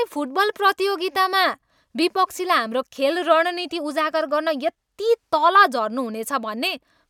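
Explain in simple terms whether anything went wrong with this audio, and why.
Nothing went wrong with this recording of speech; no technical fault can be heard anywhere in it. There is nothing to explain or fix here.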